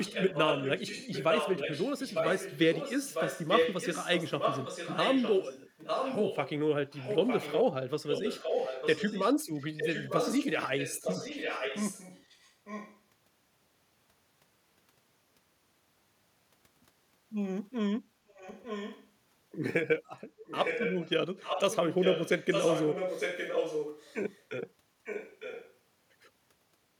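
A delayed second copy of the speech runs under the main talker from 0.0 to 6.5 s, 6.91 to 7.64 s, 8.09 to 9.34 s, 9.54 to 13.0 s, 18.28 to 19.09 s, 20.45 to 21.1 s, 21.37 to 24.44 s and 25.04 to 25.77 s. This is echo leak. The copy trails by about 0.9 s. It sits only about 5 dB below the speech, dropping to about 10 dB below at 18.28 s and 25.04 s. A far-end loudspeaker's echo canceller likely let this through.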